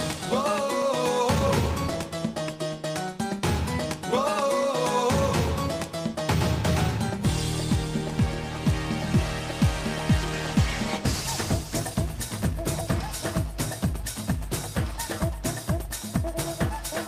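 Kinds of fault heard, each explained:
Call bitrate drop: from 10.18 to 11.87 s the sound turns coarser, then clears; the encoder's rate fell, fitting a drop from 40 to 16 kbps.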